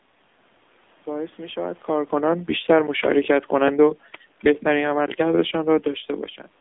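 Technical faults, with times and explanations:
Throughout: AMR narrowband mobile codec. The speech has been squeezed through the AMR-NB mobile codec at a low rate, which fits about 7.4 kbps, and the damage is plainly audible: a buzzy, synthetic edge on the voice and a swirl in the room noise behind it. The codec rebuilds speech from a vocal-tract model fed by sparse pulses, so fine detail is lost, and nothing above about 3.8 kHz survives, leaving a boxed-in telephone band.
1.91 to 5.98 s: automatic gain falling. The automatic gain control judged the incoming level too high, or its background noise too strong, and pulled its gain down gradually, by about 6 dB over these four seconds. Because the control acts on the whole signal rather than on the voice alone, the room noise sinks along with the speech, which separates it from the talker's own movements at about 1.5 s and 6 s, where the voice alone shifts in level.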